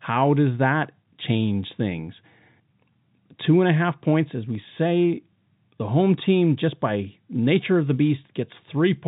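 No technical faults can be heard anywhere in this recording.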